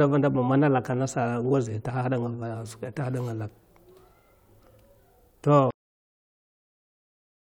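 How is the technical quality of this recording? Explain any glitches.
The recording has one clear glitch, a cut-off end. At 5.71 s the speech stops abruptly mid-sound and falls straight into digital silence with no natural decay, staying silent for the remaining 1.8 s. The final stretch of audio was never written out, so playback simply ends partway through.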